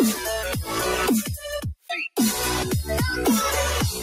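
A speech-style noise suppressor applied to music or sounds runs throughout, treating sustained tones and tails as noise. The level pumps by a few decibels, and unlike compression, attacks stay intact. The sound is cut by the noise suppressor from 1.23 to 1.49 s, dropping about 8 dB, and again from 1.68 to 1.9 s, about 15 dB. These are the sound sinking in level, not full dropouts or clean gaps.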